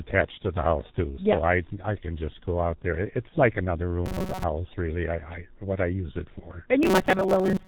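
Throughout, the speech goes through the G.723.1 codec at 6.3 kbit/s, which cuts everything above 4 kHz, leaving a heavily muffled, hoarse voice with smeared consonants.

From 3.29 to 3.33 s, the decoder conceals VoIP packet loss by extrapolating across about 30 ms of missing audio, producing a brief, fading, stretched sound.

From 4.06 to 4.44 s and again from 6.83 s to the end, the robotic sound from repeated short buffers likely comes from audio arriving too seldom. The resulting repetition, which fits a buffer of about 5 ms, imposes a rigid, metallic 188 Hz buzz over roughly half, then most, of each stretch.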